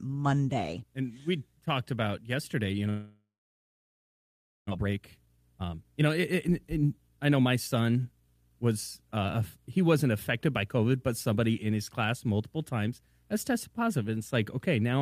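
From 2.89 to 4.73 s the speech halts. The last sound smears into a fading buzz, then about 1.4 s of near-silence follows, and speech resumes with roughly a second missing. This is likely a long network dropout. A spectrogram shows a blurred harmonic tail dissolving into an empty band, and the waveform goes almost flat.

From 4.76 to 8.51 s the speech runs at about 121% speed with unchanged pitch and sounds hurried. This is a jitter buffer speed-up: the receiver trims tiny pitch-period slices to shed the roughly 0.7 s backlog left by the gap. On a spectrogram the syllables are squeezed horizontally while the harmonic spacing stays the same.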